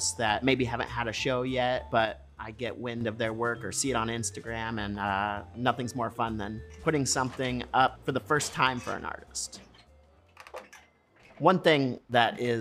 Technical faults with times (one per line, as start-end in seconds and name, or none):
2.05-3.01 one channel drops out
11.98-12.12 one channel drops out